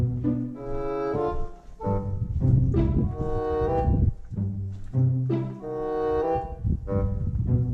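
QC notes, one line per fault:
No fault found.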